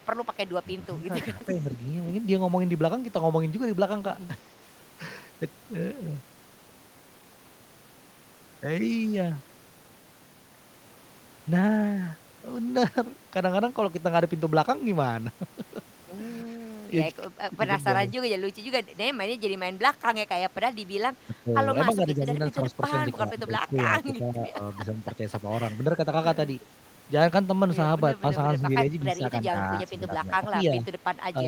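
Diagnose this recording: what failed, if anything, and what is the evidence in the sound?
Call processing: the speech dips in pieces at 0.63–1.69, 16.45–16.91 and 21.27–25.21 s and from 29.14 s on, by a few dB up to about 10 dB. This is likely speech suppressed in double talk: the echo canceller, unable to separate talker from echo, attenuated both.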